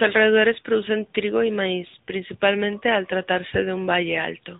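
Throughout, the speech passes through the AMR narrowband mobile codec at 10.2 kbps: nothing above 4 kHz survives, and the voice sounds plainly buzzy and synthetic. From 1.88 to 1.96 s, after "alrededores producen trigo y", lost AMR speech frames make the decoder stretch the last sound, which fades until "principalmente al" returns. The gap fits about three 20 ms frames.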